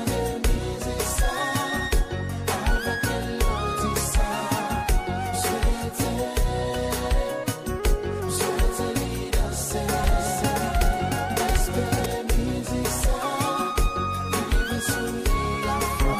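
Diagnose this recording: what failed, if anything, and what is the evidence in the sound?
Doubled audio track, likely from a slower second capture path or an out-of-step edit: from 10.04 to 12.06 s, a dry copy trails around 0.7 s behind, about 5 dB quieter.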